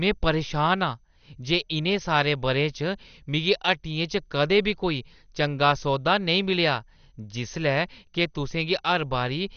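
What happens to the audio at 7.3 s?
At 7.3 s, as throughout the clip, the speech is dull, with nothing above 6.5 kHz and a gurgling, granular texture, likely from MP2 compression at a bitrate near 48 kbps that drops upper sub-bands.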